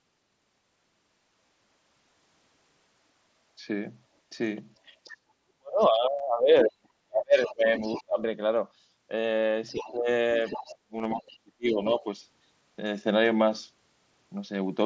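Voice packets between the headset and phone were dropped from 1.47 to 1.49 s, and the receiver filled the 22.5 ms gap with a copy of the last stretch of waveform. This concealed Bluetooth headset packet loss comes through as a brief buzzy smear.

From 5.05 to 5.16 s, the echo canceller likely failed to remove the far end's loudspeaker sound from the microphone. The other side's voice leaks through as a faint scrap about 25 dB below the speech.

From 5.06 to 8.21 s, both sides are likely talking at once, and the echo canceller turns down everything it cannot separate. This speech suppression in double talk makes the talker dip and cut out in pieces for about two seconds in total, with the deepest drops around 40 dB.

Within that stretch, a 15 ms packet loss at 6.18 s is concealed. More leakage follows from 7.43 to 8.04 s, stronger at about 15 dB below speech.

The pattern repeats from 9.74 to 12.06 s. 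The talker is pushed down by up to about 30 dB for roughly a second and a half. Leaked far-end voice appears from 9.68 to 9.92 s, 10.47 to 11.29 s and 11.85 to 11.89 s, ranging from about 15 to 20 dB below speech.

From 10.98 to 11.05 s, scattered packet losses of 37.5 ms in total, with no run longer than 15 ms, add brief buzzy fills with slight warbles. A final 7.5 ms loss at 12.63 s is barely audible.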